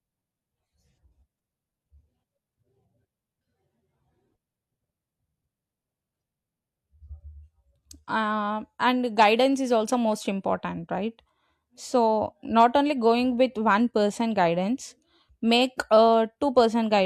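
A speech recording with no technical faults to report. Nothing in it points to a problem anywhere in the recording or playback chain.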